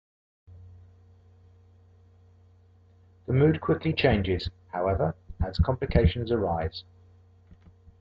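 No technical faults are audible anywhere in this recording.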